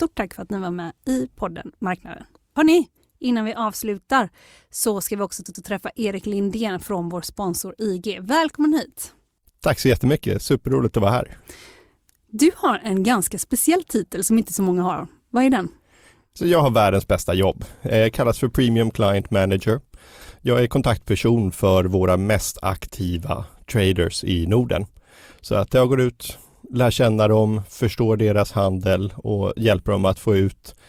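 A 92.9 ms block, fitting one compressed frame, was decoded twice more at 5.46 to 5.64 s, after "så ska vi också". These repeated frames stutter, adding 185.8 ms.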